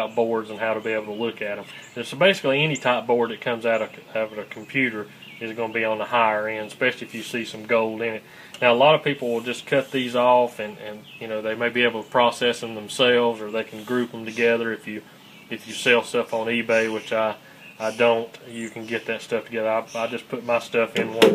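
Nothing is technically wrong with this audio.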